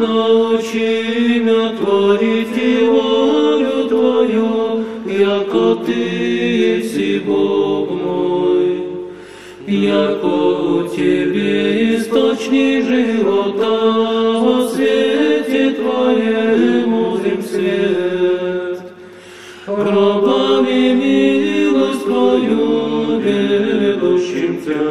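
No faults to report: nothing audible anywhere in the clip calls for comment.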